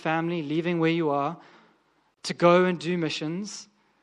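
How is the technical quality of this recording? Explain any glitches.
The recording has two technical problems: audible lossy-codec damage throughout and one brief dropout partway through.

Throughout the clip, the speech has a watery, swirling quality, with metallic chirping on sibilants and softened consonant attacks. The likely cause is MP3 compression at a low bitrate, consistent with about 64 kbps. With too few bits, the encoder zeroes quieter frequency lines. Those lines flicker on and off from frame to frame, which produces the swirl and chirps.

From 2.14 to 2.17 s, a gap of about 30 ms cuts into the continuous speech. Its edges are smeared, and the speech resumes where it stopped. This is a gap at a join of encoded pieces. The audio was encoded in separate segments and spliced without trimming, so the start-up delay of one encoder run and the padded final frame of the other remain as dead air.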